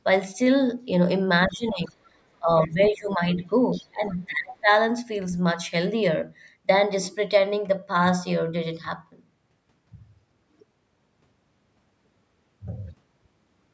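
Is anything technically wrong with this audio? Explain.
Yes. Between 1.46 and 4.7 s the talker's speech repeatedly dips and breaks, and faint scraps of a second voice intrude.

Speech suppressed in double talk: at 1.46 to 2.04 s, 2.39 to 2.51 s, 2.67 to 3.47 s and 3.75 to 4.7 s the voice sinks by roughly 15 to 25 dB or cuts out in pieces. The likely cause is an echo canceller that, with both sides talking, turned the near talker down along with the echo.

Other side's voice leaking through: brief fragments of another voice appear at 2.59 to 2.7 s and 3.72 to 3.87 s, roughly 25 dB below the speech, likely where loudspeaker echo slipped past cancellation.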